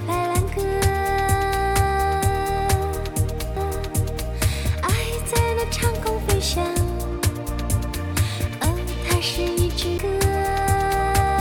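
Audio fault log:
9.98 s, CD skip. A short mute of roughly 10 ms is heard. The sound then resumes from a different point, with an abrupt break in continuity. A knock or a flaw on the disc threw the laser off its track onto another turn of the spiral. The player silenced its output while it relocked. It picked up again on the new turn, so the material jumps rather than continuing smoothly.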